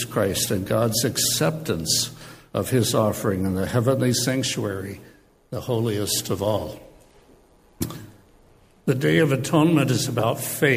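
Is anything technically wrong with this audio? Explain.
No, nothing is technically wrong with this audio.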